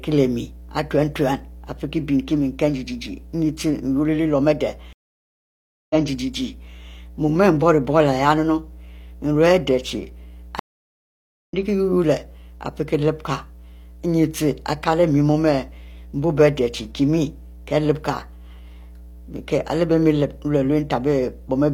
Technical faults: mains hum; stream reconnect

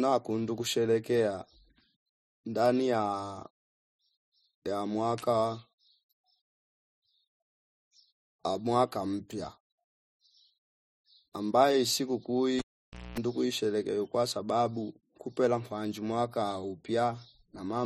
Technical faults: cable pulled and plugged in

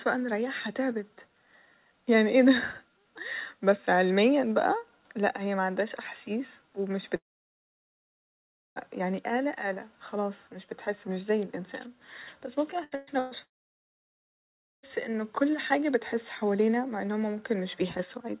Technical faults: long network dropout; burst of packet loss

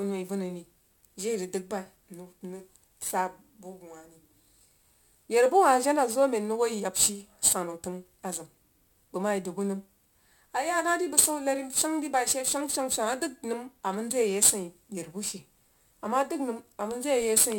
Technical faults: crude rate conversion

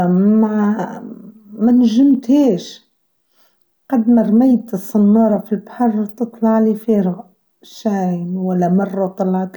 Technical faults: none

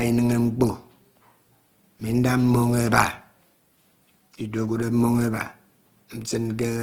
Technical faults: Opus compression

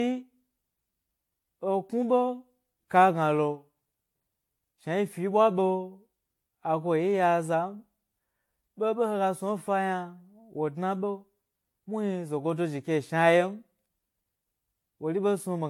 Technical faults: generation loss

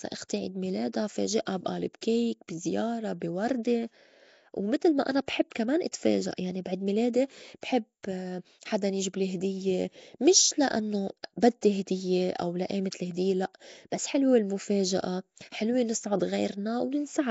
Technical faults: Nellymoser compression

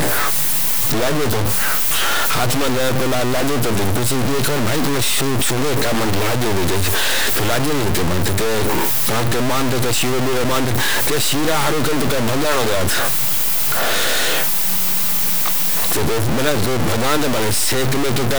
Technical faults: low bit depth without dither

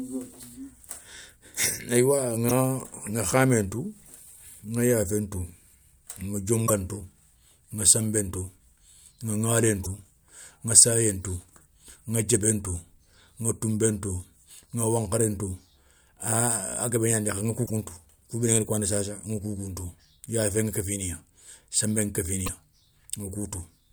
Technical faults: damaged data in a compressed stream

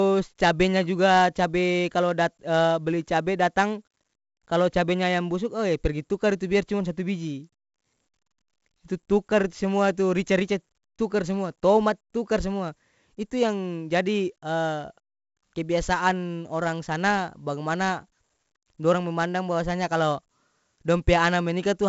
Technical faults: 4-bit ADPCM compression

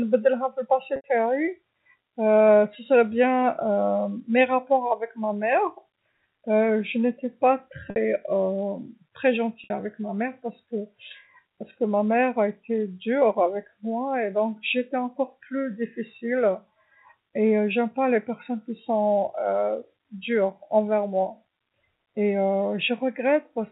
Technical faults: packet loss with pitch repetition

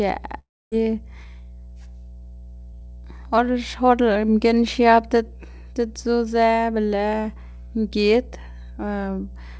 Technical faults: mains hum; long network dropout

